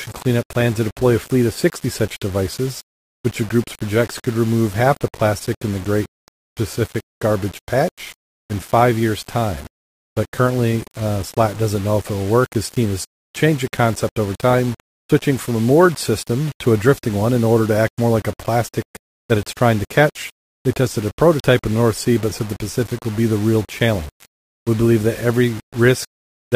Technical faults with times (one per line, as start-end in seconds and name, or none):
0.00-26.55 low bit depth without dither